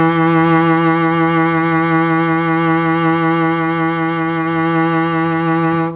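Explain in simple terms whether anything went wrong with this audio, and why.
Nothing went wrong with this music: it came through an ordinary call connection whose phone-style coding leaves out everything above about 4 kHz, so the narrow, telephone-like sound is simply how that kind of call carries audio.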